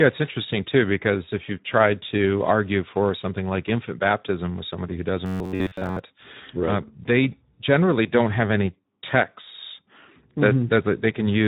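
The whole clip carries the Speex codec: the speech sounds hoarse and grainy because the low setting leaves few bits for the excitation, which fits a rate near 11 kbps.

From 5.26 to 6.01 s, right after "baptism with somebody who" and before "uh right", the speech becomes a rigid metallic buzz at about 94 Hz. That's robotic sound from repeated short buffers, most likely a roughly 10.7 ms chunk replayed over most of that stretch while fresh audio was skipped.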